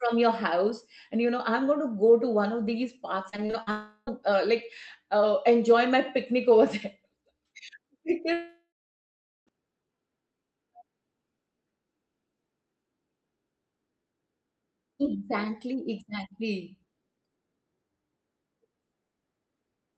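Repeated packet loss (robotic sound) runs from 3.29 to 3.69 s. Five short holes open in quick succession, the longest 39 ms, and each is patched by stretching the preceding sound before the next hole arrives. About a third of that span is filler rather than real signal, so the audio turns choppy, with small pieces of the speech missing.

A long network dropout follows directly, from 3.71 to 4.09 s. For about 0.36 s the original audio is gone, and the gap is filled almost entirely by a smeared continuation of the last sound, with only a brief 20 ms silence before the speech resumes further on.

A second, longer dropout comes at 8.33 to 9.49 s, with about 1.14 s missing. The final sound is drawn out as a fading buzz for roughly a third of a second, then about 0.8 s of silence remains before the audio returns, likely because no packets reached the receiver during that stretch. Throughout, the audio carries the band limit of a call codec, with nothing above about 8 kHz.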